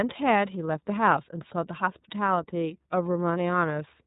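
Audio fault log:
throughout: iLBC codec. The speech is band-limited, with nothing above about 3.8 kHz, so sibilants lose their hiss and the sound is muffled and telephone-like. The codec damage is plainly audible as a rough, slightly synthetic texture, because each frame's excitation is coded on its own without drawing on the previous one. This fits the 30 ms frame mode at around 13.33 kbps. On a spectrogram the energy stops at a hard ceiling near 3.8 kHz.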